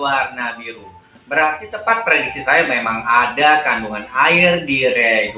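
The audio pumps and thins throughout, with held material and tails sinking by roughly 5 dB while attacks come through. This is a noise suppressor applied to music or sounds: a speech-tuned suppressor left on, reading steady tones, ambience and decay as noise. The sound is heard through a narrowband call path that passes nothing above 4 kHz, which fits G.711. From 0.56 to 1.31 s, the sound is cut by the noise suppressor for most of that span. It dips by up to about 12 dB as the suppressor treats that passage as noise and pulls it down harder than the surrounding audio.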